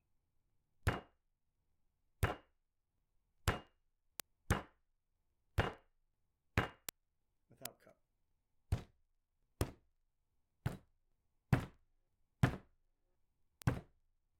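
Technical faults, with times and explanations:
0.11–14.39 s, word clock ticks: some 300 sharp ticks of uneven strength recur roughly every 0.05 s, a steady pace that points to two unlocked clocks roughly 500 ppm apart, each slip misreading samples and dropping or repeating one. Their regular spacing sets them apart from random clicks.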